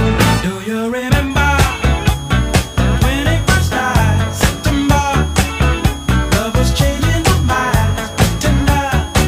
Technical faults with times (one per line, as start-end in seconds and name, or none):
1.30-9.28 switching supply whistle